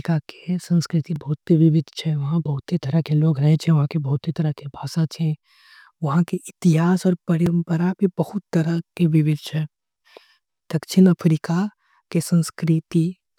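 At 1.16 s, after "के संस्कृति", and at 7.46 s, after "उहा के इतिहास आऊ", there's a block of digital silence. The audio drops to zero for 1.6 and 3.6 ms with no fade, so each one comes across as a quick tick.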